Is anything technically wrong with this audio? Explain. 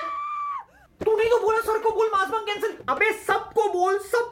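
No, the signal shows no technical faults at any point in the recording.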